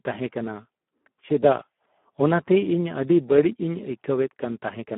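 A speech clip carrying Speex codec damage from start to finish: the sound is noisy and hoarse, which fits a low-bitrate setting near 8 kbps starving the excitation. The band runs roughly 200 Hz to 3.4 kHz, with nothing above 3.8 kHz.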